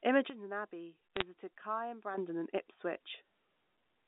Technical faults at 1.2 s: sudden gain jump; bit errors on a digital phone line

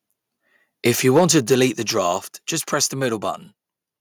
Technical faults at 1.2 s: microphone overload; microphone volume stepped down

